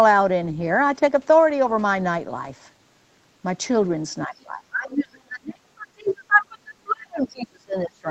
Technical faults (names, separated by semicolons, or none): speech suppressed in double talk; other side's voice leaking through